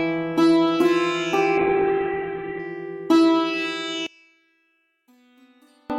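From 1.63 to 2.71 s the music turns coarse and watery as a call bitrate drop takes hold. The bandwidth collapses from 20 kHz to 4 kHz for about a second, which fits the encoder falling from around 96 kbps to roughly 7 kbps, muffling everything.

From 4.07 to 5.90 s the centred content almost disappears, the level falling by about 35 dB and leaving only a faint residue. This is likely one channel inverted, with the shared material cancelling when the stereo pair is summed to mono.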